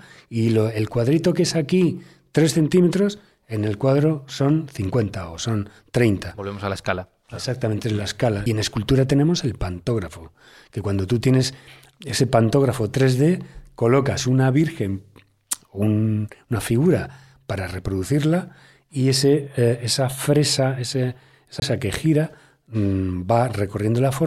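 CD skips at 8.46 s and 21.60 to 21.62 s: the laser jumps to another turn of the disc's spiral, leaving a tick, a mute of a few milliseconds and then about 20 ms, and an abrupt jump in the speech.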